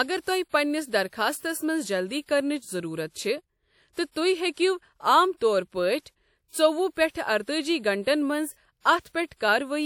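Pre-echo at 4.11–4.16 s and 9.00–9.05 s: block-spread quantisation noise smears about 50 ms of hiss ahead of sharp speech attacks, softening them.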